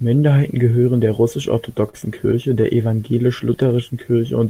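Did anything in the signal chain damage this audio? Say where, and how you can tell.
Yes, at the network stage: a short stall from a late packet at 1.89 to 1.95 s and again at 2.61 to 2.79 s. Each time the jitter buffer ran dry, the receiver held the last sound 38 ms, then 18 ms, and resumed without loss, playing back later.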